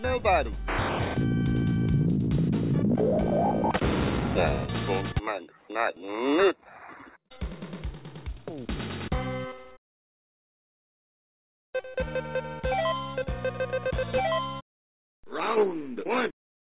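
Nothing is technically wrong with this audio.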